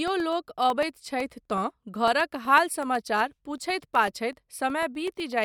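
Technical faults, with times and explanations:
0.08 to 5.32 s, periodic USB or driver dropouts: a recurring background task stalls the USB bus or audio driver every 0.125 s, and each stall swaps roughly a millisecond of the speech for silence. About forty of these tiny gaps land at an even eight per second across the clip, so the speech carries a steady train of small ticks, heard wherever the signal is present and fading into the pauses.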